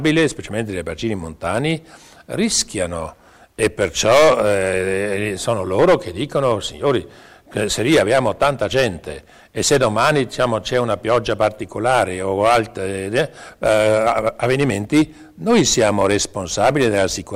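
A stage in the chain is being driven about 15 dB past its limit throughout, causing hard clipping: a few percent of samples are flattened, adding harsh fuzz to every loud passage.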